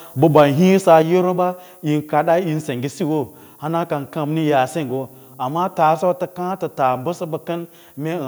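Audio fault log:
throughout: low bit depth with noise shaping. A thin, steady hiss rising toward the top of the band, about 30 dB below the speech, from coarse rounding pushed upward, consistent with roughly 9 bits.
0.36–0.42 s: microphone overload. A brief harsh, crackly edge on the loudest sound, likely peaks driven about 2 dB past the converter's limit, flattening a small share of samples.
1.02 s: microphone volume stepped down. Speech and background suddenly drop about 5 dB, likely the call software lowering the input level in one step after the distorted peak.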